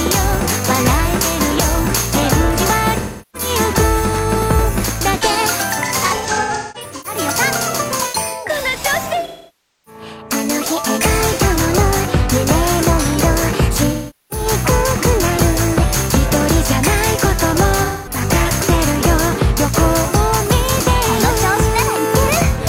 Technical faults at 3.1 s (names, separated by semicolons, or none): AAC frame loss with concealment